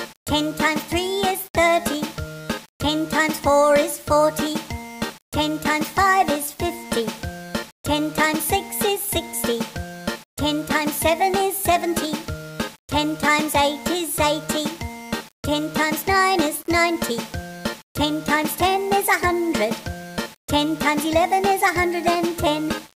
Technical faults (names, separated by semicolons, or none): low bit depth without dither